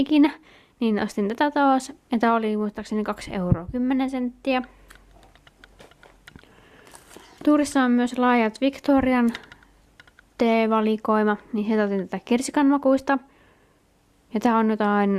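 Nothing here trips any alarm; there's no dropout, click, glitch or distortion anywhere to point at.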